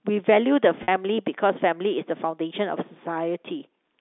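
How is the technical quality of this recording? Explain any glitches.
One glitch stands out, heard over narrowband telephone audio consistent with G.711 coding. Packet loss with pitch repetition at 0.83 to 0.88 s: about 50 ms went missing, which fits roughly five packets, and the receiver repeated the last pitch period to fill it, giving a brief held, buzzy sound.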